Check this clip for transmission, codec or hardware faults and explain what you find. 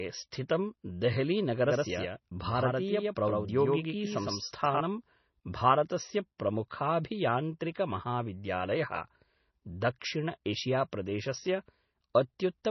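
Two faults are present. Heavy MP3 compression damage runs through the whole speech clip. A doubled audio track appears from 1.67 to 4.81 s.

MP3 compression affects the entire clip. Nothing remains above 6 kHz. The sound is watery and swirly. S sounds carry metallic chirps, and attacks smear. The encoder likely ran short of bits and zeroed weak frequency lines from frame to frame. That fits a bitrate near 24 kbps.

The doubled audio track runs from 1.67 to 4.81 s. A second full-band copy trails about a tenth of a second behind, at roughly the same level. It has no decay or room colour. It starts and stops abruptly. It likely comes from a slower second capture path or an edit holding two copies out of step.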